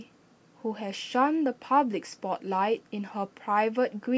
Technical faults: none

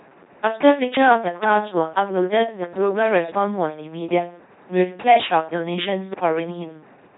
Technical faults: LPC-10 vocoder; loud pop

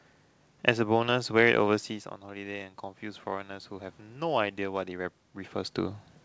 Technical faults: automatic gain rising

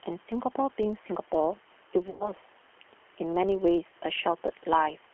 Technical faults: G.729 codec; filter restarted on every block; VoIP packet loss concealed by the speech codec

